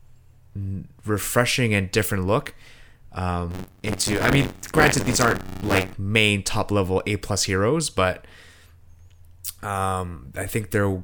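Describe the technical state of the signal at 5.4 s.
Buffer tearing runs from 3.50 to 5.94 s, just before "main top level": writer and reader cross inside each 512-sample-like buffer, splicing in about a fifth of audio roughly 40 ms stale, producing a 93.8 Hz robotic rattle.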